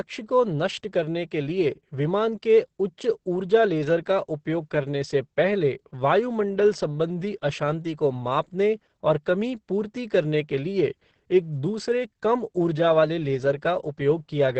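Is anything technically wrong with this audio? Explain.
Yes. Throughout the speech there is heavy Opus voice compression in its SILK mode, consistent with a bitrate near 10 kbps. Coarse coding of the excitation leaves the speech muffled, hoarse and slightly robotic. A spectrogram shows a flat ceiling with nothing above 8.5 kHz.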